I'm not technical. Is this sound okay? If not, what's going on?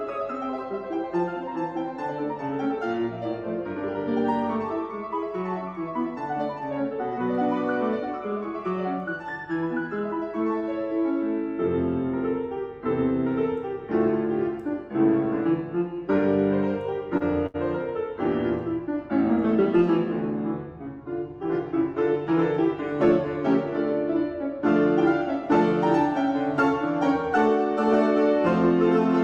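No. There are two kinds of glitch.

At 17.17 and 17.47 s there is a short stall from a late packet. A piece of audio arrived late, so the sound briefly freezes and holds.

From 21.84 to 22.66 s there is a jitter buffer speed-up. The sound plays about 4% faster, at the same pitch, to catch up.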